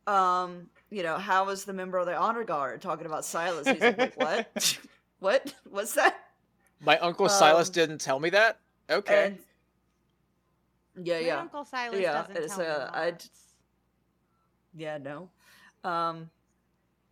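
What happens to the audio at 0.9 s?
Nothing goes wrong at 0.9 s; the speech plays through that moment intact, with no dropout, click or distortion.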